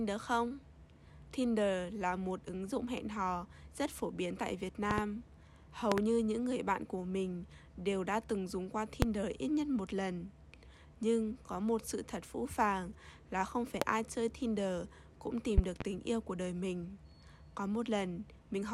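Sharp loud pops cut through the sound five times while it carries on underneath: double pops at 4.91–5.01 s and 5.92–6.01 s, single ones at 9.02–9.05 s and 13.82–13.85 s, and a more spread-out double at 15.58–15.84 s. Each jumps roughly 20 to 25 dB above the surrounding level. They are likely voltage spikes from a plug, switch, static discharge or driver glitch, shaped by the downstream circuitry into brief thumps.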